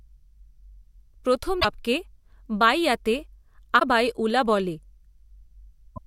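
At 1.57 to 1.65 s, 3.76 to 3.82 s (just before "ঊলা বলে") and 5.92 to 5.98 s, short glitches break through the speech, each roughly 70 ms long. This is damaged data in a compressed stream: the decoder hits corrupted bytes, misreads those frames and loses sync until it finds the next valid header. On a spectrogram each appears as a brief vertical disruption. In the waveform, each shows as an abrupt burst or discontinuity.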